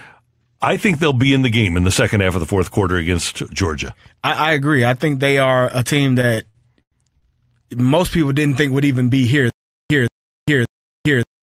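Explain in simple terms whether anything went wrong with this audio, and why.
Two things go wrong. From 6.21 to 7.24 s there are repeated stalls (stutter): the speech snags six times, the longest hitch about 89 ms, as packets arrive late and the receiver stretches the last sound to cover. About a quarter of that stretch is filler, but nothing is lost.

From 9.50 s to the end there's stutter with silent gaps: the same 0.18 s scrap repeats every 0.58 s, with 0.4 s of dead silence between. The likely cause is a stalled player or stream retrying, and whatever should have played there is gone.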